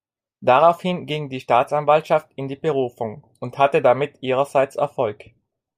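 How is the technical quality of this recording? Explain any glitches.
Nothing technically wrong can be heard in this recording.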